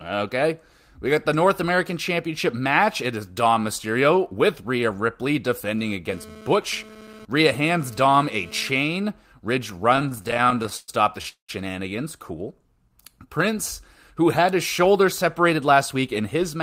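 GSM phone buzz runs from 5.79 to 8.69 s: a hard, raspy buzz at about 217 Hz with a dense stack of harmonics, sitting about 21 dB below the speech and bearing no relation to it. A nearby 2G handset's burst transmissions are being picked up and rectified by the audio circuitry. Here the buzz comes and goes rather than holding steady, which points to the phone moving data rather than carrying a call.

Repeated stalls (stutter) follow from 9.93 to 11.51 s. Packets kept arriving late, so the receiver's jitter buffer ran dry roughly two dozen times. At each stall the last sound was stretched out, and faded in the longer waits, until playback could resume. About 552 ms were filled this way, roughly 35% of the span, with the longest hold lasting 200 ms. Nothing is lost, but the speech drags and stutters.

Jitter buffer slow-down occupies 12.59 to 13.55 s. With its reserve running low, the receiver built up delay by repeating single pitch periods and slivers of pauses over and over. 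This added 78 ms, so the speech plays at 92% speed. The pitch is unchanged, but sounds are drawn out and sluggish.

Jitter buffer speed-up starts at 15.50 s, right after "who had his shoulder", and continues to the end. The buffer held more audio than it wanted, so the receiver trimmed short pieces of one or a few pitch periods in quick succession, removing around 70 ms in all. The speech runs at 107% speed with its pitch intact and sounds hurried.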